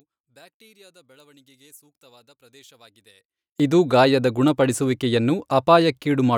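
From the start to 3.6 s the speech is nearly gone, sitting about 34 dB down and reduced to a faint residue, before full level returns with "ಇದು ಗಾಯದ ಗುಣಪಡಿಸುವಿಕೆಯನ್ನು". This is most likely one channel inverted: one stereo side had reversed polarity, so when the pair was summed to mono the centred content common to both cancelled, leaving only the small difference between the channels.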